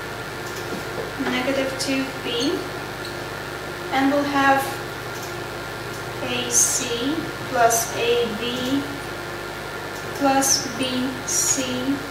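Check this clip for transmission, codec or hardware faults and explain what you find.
One hardware fault runs through the whole clip: mains buzz. Switching spikes from a dimmer, rectifier or poor shielding enter twice per 50 Hz cycle. Their harmonics reach several kilohertz. The result is a steady, raspy buzz about 15 dB below the sound.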